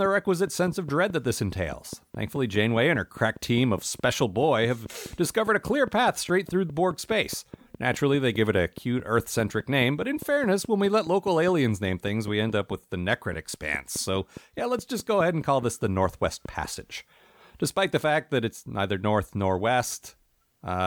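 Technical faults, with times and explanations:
0.06–16.66 s, train of clicks: a regular ticking runs at about 4.8 clicks per second, some seventy in all, each roughly as loud as the speech and audible through the pauses as well. Every click has much the same brief shape, most likely from interference or a faulty connection or power supply injecting pulses at a steady rate. On a waveform they show as evenly spaced thin spikes. On a spectrogram they appear as narrow vertical broadband lines.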